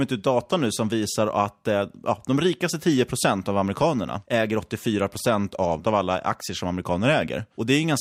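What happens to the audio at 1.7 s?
Nothing goes wrong at 1.7 s; the speech carries on intact through that moment, with no dropout, click or distortion.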